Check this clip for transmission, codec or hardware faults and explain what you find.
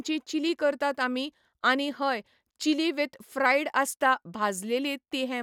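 No transmission, codec or hardware faults turn up in this clip.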